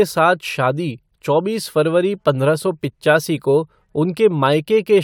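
Nothing stood out on listening to this speech recording.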